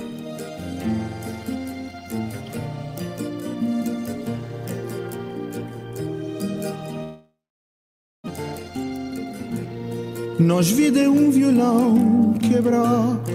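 A long network dropout runs from 7.03 to 8.30 s: the last sound smears into a fading buzz, then about 0.9 s of silence, and roughly a second of audio never returns, likely from lost packets.

Jitter buffer speed-up follows at 8.37 to 9.80 s (110% speed, about 150 ms trimmed) and 10.26 to 10.96 s (107%, about 50 ms). Pitch-period slices are cut to drain excess delay, so the sound runs hurried at unchanged pitch.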